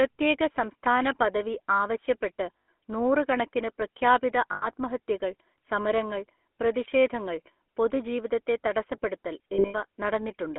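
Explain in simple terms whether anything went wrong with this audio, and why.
The whole clip carries the sound of the GSM full-rate codec, the original mobile-phone voice coder. It rebuilds speech from a simple model of the throat driven by sparse pulses, and it keeps only a narrow band from about 250 Hz to 3.4 kHz. That gives the voice its buzzy, gravelly, boxed-in roughness.

Lost GSM frames cause brief metallic rings at 2.58 s and 4.52 s, each about 100 ms long. Another cluster around 9.54 s spans roughly 200 ms, with the longest gap about 70 ms. When frames go missing, the decoder repeats the last good sound at a falling level, so the voice briefly smears into a rough, ringing hum.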